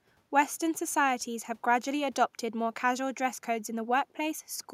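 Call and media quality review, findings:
No audible faults found.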